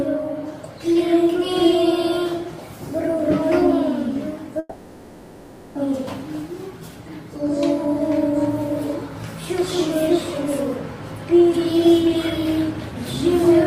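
At 4.59 s the audio turns into a buzzy, smeared continuation of the last sound that fades toward a faint steady hiss, never quite silence, until 5.77 s. The audio then resumes with about 1.2 s gone, likely a long network dropout the receiver papered over.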